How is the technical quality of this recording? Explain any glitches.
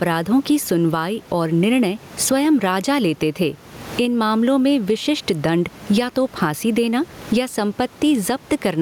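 The recording has one clear fault that runs from start to finish.

Gain pumping, throughout the clip: the input gain was likely set far too high, so a fast limiter or compressor clamps down whenever the speech gets loud and releases in the pauses. The swing is around 15 dB. The room noise sits about 31 dB below the speech, and the speech itself sounds squashed, with loud and soft parts pressed close together.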